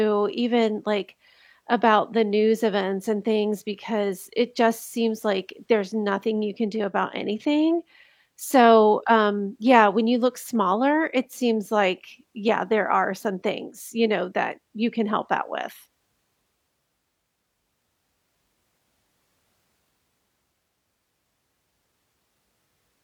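Speech recording, no technical faults detected on listening.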